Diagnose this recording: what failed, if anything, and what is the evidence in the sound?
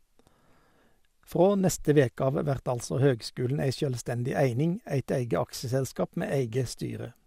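DAB burbling at 2.84 s, between "neste veke av vert" and "høgskulen ei sjølvstendig". Six frames were hit, at a bit error rate of roughly 0.1%. Weak reception let bit errors past the error correction into the MP2 audio data.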